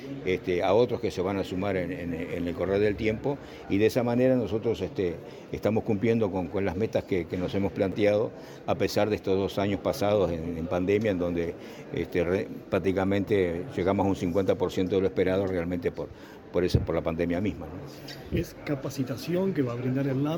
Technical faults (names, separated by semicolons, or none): chunks out of order